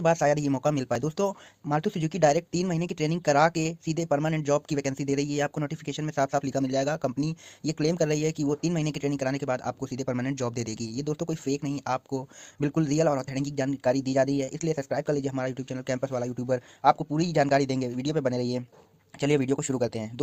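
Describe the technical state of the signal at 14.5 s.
At 14.5 s there is a brief smear, a wobble in the sound lasting from about 14.45 to 14.49 s. This is short concealed packet loss: about 20 ms of audio arrived too late to be decoded, so the receiver extended the preceding sound to cover the gap, synthesising about 26 ms in total before crossfading back into the real signal.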